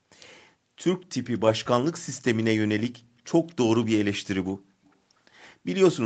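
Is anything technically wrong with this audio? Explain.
Yes. This speech has an echo leak. Brief, faint scraps of earlier speech come back at 1.01–1.05, 1.34–1.39, 3.49–3.55, 3.82–3.86, 4.48–4.53 and 4.84–4.93 s. Each trails the original by 238 ms and sits roughly 25 to 40 dB below it, loudest near 3.8 s. The likely cause is a loudspeaker on one side whose sound reached that side's microphone, with the echo canceller letting some of it through. Room reverberation smears sound continuously, but these are separate copies at one fixed delay.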